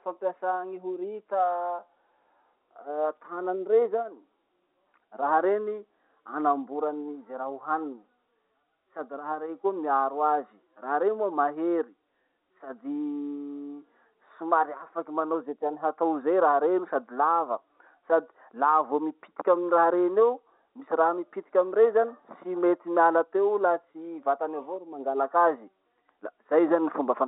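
Nothing goes wrong anywhere in this bit of speech, which just sits in the narrow band you'd expect from an ordinary phone line the whole way through.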